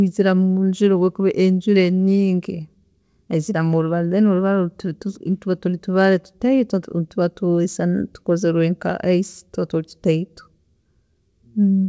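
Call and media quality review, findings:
No call or media quality findings for this speech clip.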